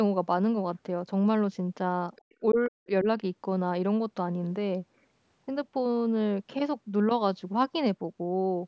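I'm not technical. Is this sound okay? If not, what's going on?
No. Other side's voice leaking through, at 2.16 to 2.35 s: a faint second voice slips in briefly behind the talker. The likely cause is the person on the other end coming out of this talker's loudspeaker and the microphone picking it back up.

Speech suppressed in double talk, from 2.41 to 3.06 s: the talker's voice drops away sharply, adding up to about a third of a second. Both sides were likely talking at once, and the system fighting the echo turned everything down, the talker included.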